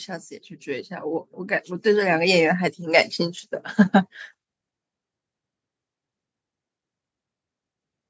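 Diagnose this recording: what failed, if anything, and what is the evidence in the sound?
The fault sits in the call processing stage: automatic gain rising. From 0.06 s to 2.83 s the level climbs steadily by about 9 dB, and the speech and the background noise swell together rather than the speech alone getting louder. That shared rise is the signature of a gain control that judged the input too quiet and ramped its gain up over nearly three seconds. The call microphone path's band limit, with nothing above 8 kHz, is normal.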